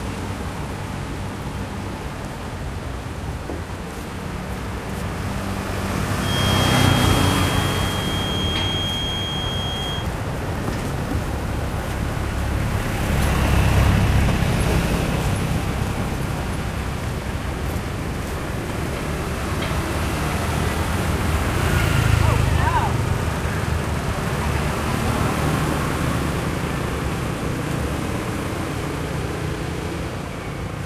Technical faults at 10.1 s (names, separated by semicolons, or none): feedback whistle